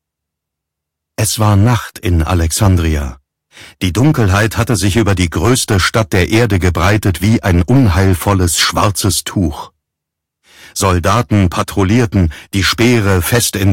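Hard clipping runs through the whole clip: the audio's driven about 12 dB too hot, so roughly 4% of samples get flattened into harsh fuzz on loud moments.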